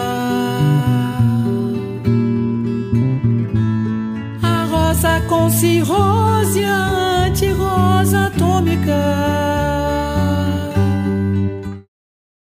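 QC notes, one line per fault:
No faults heard.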